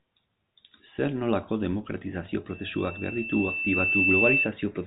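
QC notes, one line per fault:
2.50–4.53 s, loudspeaker feedback squeal: right after "nolako demokratizazio" a pure tone near 2.7 kHz appears and swells over roughly one and a half seconds until it stands about 10 dB above the speech. A microphone was picking up the loudspeaker it fed, and at that frequency the loop gain passed unity, so the tone regenerated itself on each pass. It sits inside the telephone band, which stops near 3.8 kHz.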